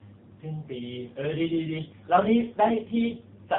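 Tandem speech coding runs through the whole recording: the audio was decoded and re-encoded at each network border, so the second speech coder worked on already degraded output. It sounds rough, muffled and warbly, with nothing above 3.7 kHz, which fits two AMR-NB stages bridged by G.711.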